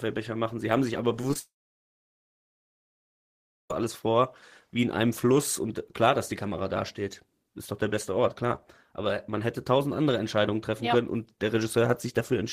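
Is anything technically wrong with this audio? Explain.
Yes. There are two kinds of fault in this speech.

Short concealed packet loss occurs at 1.21 s, then at 1.31–1.33 s and 1.33–1.36 s, right after "haben sich aber". Lost packets of about 10–20 ms were patched by extending the preceding sound. Each one is a brief smear or wobble, visible on a spectrogram as smoothed, blurred harmonics.

From 1.39 to 3.71 s the sound stops, then picks up mid-phrase at "alles vor wie in". This is likely a long network dropout. The first moment carries a fading concealment buzz, followed by about 2.2 s of silence. The waveform shows a flat gap, and the spectrogram shows an empty band.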